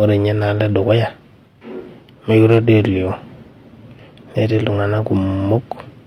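From 2.51 to 2.75 s the loudest moments of the speech pick up a brief crackly edge, a gritty rasp riding on the peaks rather than a continuous fuzz. This is hard clipping. For that quarter second the signal runs about 2 dB hotter than the stage carrying it can pass, so each peak is sheared off flat. Those squared tops add harmonics high in the spectrum, and that added energy is the crackle.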